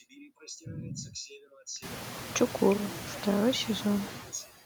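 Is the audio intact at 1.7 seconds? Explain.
No. Noise suppressor artifacts run through the whole clip, so 1.7 s is affected too. The suppressor works frame by frame. It lowers the bands it judges to be steady noise, but here it takes off only about 1 dB. So the background dips only slightly between phrases and comes back under the speech. The room noise itself climbs a little later, at around 2 seconds.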